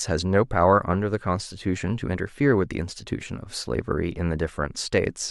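No technical faults can be heard anywhere in the recording.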